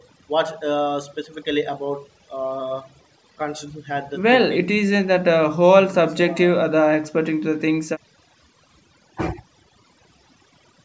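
Overdone noise removal runs through the whole clip. A noise reduction stage set far too aggressively treats any frequency band sitting near its noise estimate as unwanted and pulls it down hard or mutes it, taking the softer parts of the speech along with the noise. The gaps between phrases collapse to near silence scattered with twinkling specks, over a call microphone path whose band stops at 8 kHz.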